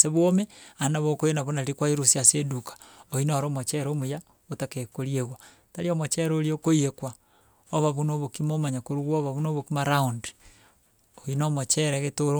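Nothing technically wrong turns up in this speech recording; no dropouts, glitches or other faults can be heard anywhere in it.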